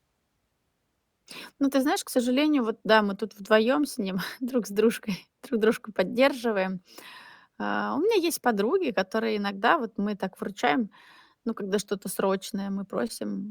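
No technical faults can be heard.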